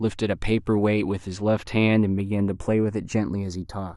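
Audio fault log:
throughout, channels drifting apart: left and right appear to run on separate clocks, a mismatch near 70 parts per million, so their offset creeps to roughly 0.2 ms. Summed to mono, comb notches sweep slowly down the spectrum, giving slow flanging on the speech.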